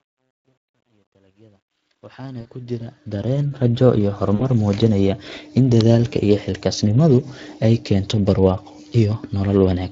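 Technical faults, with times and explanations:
Throughout: Speex codec damage, a hoarse, noisy CELP texture consistent with roughly 20 kbps; the spectrogram shows smeared harmonics and noise-like fill in the upper band.
0.00–3.72 s: truncation distortion on a fade, across the smooth fade-in, gritty, worst before 2.26 s; the waveform shows square steps, fitting roughly 12-bit depth without dither.
2.41–2.45 s and 4.35–4.49 s: VoIP packet loss concealed by the speech codec. About 40 ms gaps are filled with decaying extrapolation; the spectrogram shows fading energy across the gaps.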